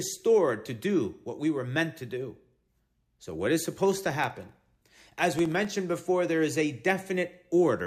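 From 3.6 to 5.71 s, before "before there is a", periodic USB or driver dropouts blank about half a millisecond every 64 ms, leaving regular ticks.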